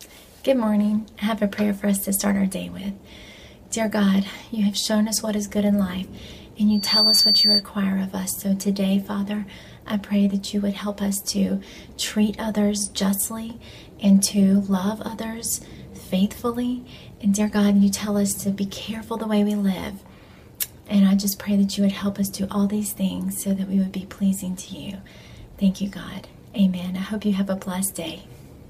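From 6.70 s to 7.64 s a loudspeaker feedback squeal breaks out at 4.6 kHz. The microphone was picking up the loudspeaker it fed, and at that frequency the loop gain exceeded one, so the tone fed on itself, swelling over roughly a third of a second until it sat about 5 dB above the programme. Unlike a steady interference whistle, which appears at full level, this single tone grows out of nothing and then stops.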